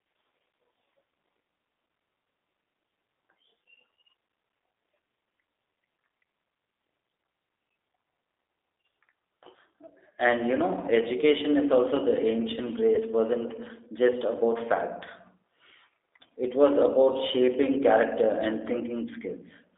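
From start to finish the speech carries the sound of the G.729 codec. The band runs only from about 300 Hz to 3.7 kHz, and within it the voice has a plainly audible rough, synthetic edge. That roughness, which fits an 8 kbit/s coder, comes from rebuilding each 10 ms frame from a vocal-tract filter, a pitch predictor and a handful of pulses. This sets it apart from simple band-limiting, which would muffle the sound without adding grain.

At 12.95 s, VoIP packet loss concealed by the speech codec leaves about 20 ms missing, which fits a single lost packet. The decoder fills the gap by repeating its last pitch and filter at falling gain, so the sound is stretched out and fades rather than dropping to silence. The speech stays weakened until about 13.01 s while the decoder recovers frame by frame. That lingering recovery is what distinguishes it from a plain dropout or a click.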